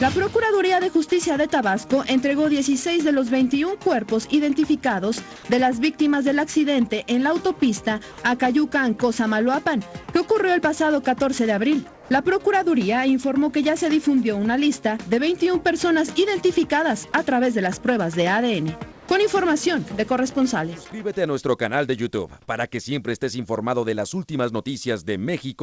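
At 5.36 s, 11.94 s and 18.92 s, the real background briefly gives way to comfort noise for 80 ms, then 160 ms, then 160 ms. The likely cause is discontinuous transmission, with the receiver synthesising a steady, featureless hiss. The first patch keeps the level, but the later two drop about 5 dB. On a spectrogram, the textured background turns smooth and uniform, capped at 8 kHz like the rest of the G.722 call audio.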